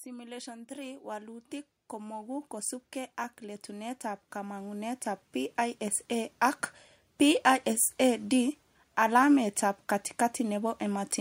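Automatic gain rising from 0.05 to 2.56 s, and again from 3.4 to 6.4 s. In each stretch the gain control judged the incoming speech too quiet and pushed its amplification upward, by about 10 dB in the first ramp and about 9 dB in the second. Because the whole signal is boosted, the voice and the background noise beneath it swell together, climbing steadily over two to three seconds rather than jumping.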